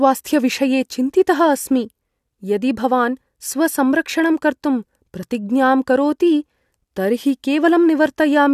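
No dropouts, glitches, clicks or other technical faults turn up anywhere in this speech recording, so there's nothing here to flag.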